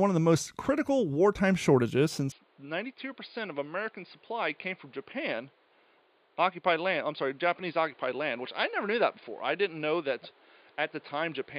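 From 2.32 s, speech turns dull, about 10 dB quieter, cut above 4.9 kHz, with new noise: likely input switched to a poorer device, not filtering.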